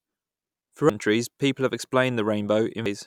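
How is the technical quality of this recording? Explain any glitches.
The recording has two brief glitches from damaged data in a compressed stream, at 0.90 s and 2.86 s. Corrupted bytes there made the decoder misread frames and resynchronise at the next header, leaving a short chirp, squawk, click or hole.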